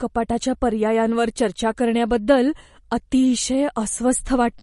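It's a speech clip with MP3 compression throughout, likely a low bitrate encode around 40 kbps: nothing above 11.1 kHz, with plainly audible watery, swirly artifacts and metallic chirps on the sibilants.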